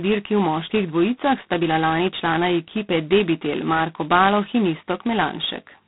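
Throughout the speech, G.726 ADPCM coding is at work. The codec sends only a small difference from a predicted sample each time. Here that difference is squeezed very hard, which fits its 16 kbit/s mode. The damage is heavy. A harsh, rasping hiss rides on the speech and rises and falls with its level. The line band runs from about 150 Hz to 3.7 kHz, and nothing passes above 3.8 kHz. The sound is thin and muffled.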